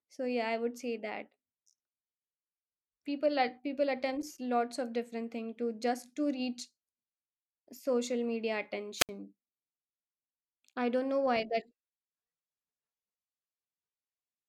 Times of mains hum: none

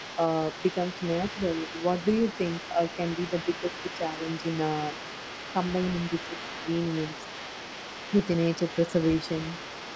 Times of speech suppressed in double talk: 3.30-4.27, 6.28-6.68

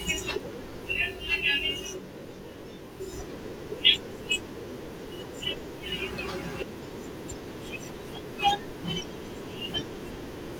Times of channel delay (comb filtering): 0.92-3.13

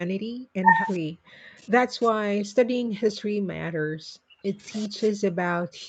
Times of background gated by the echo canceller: 0.00-0.09, 2.11-2.48

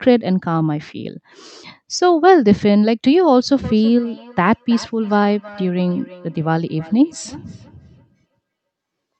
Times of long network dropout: none

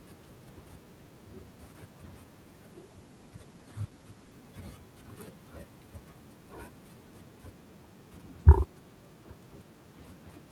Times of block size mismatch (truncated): none

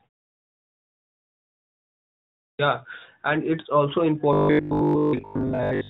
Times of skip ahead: none

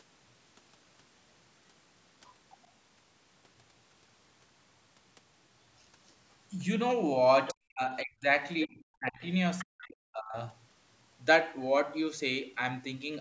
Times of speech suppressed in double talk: 7.52-8.26, 8.66-9.23, 9.64-10.37

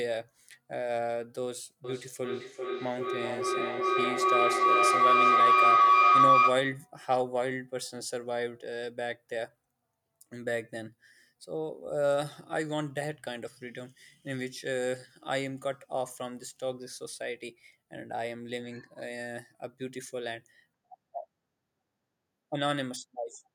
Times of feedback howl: 1.84-6.91

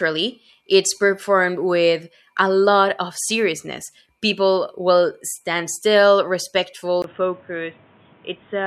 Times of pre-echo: none

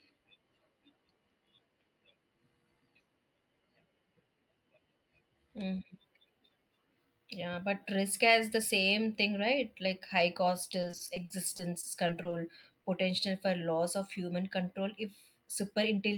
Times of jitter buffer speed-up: 14.74-15.98

